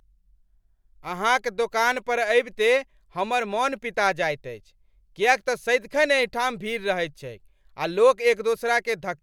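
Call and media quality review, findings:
No audible faults found on the speech path; no action needed.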